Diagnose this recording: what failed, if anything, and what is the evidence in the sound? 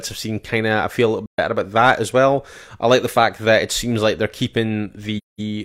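The codec stage failed, with AAC frame loss with muting. The speech drops into silence twice: from 1.26 to 1.39 s, a gap of about 128 ms that fits three lost frames, and from 5.17 to 5.40 s, about 213 ms that fits five. The decoder zeroed the missing spectra, and the overlapping transform windows taper the sound out and back in. A spectrogram shows full-band blank columns with blurred edges, and the waveform envelope slopes smoothly to silence rather than cutting off abruptly.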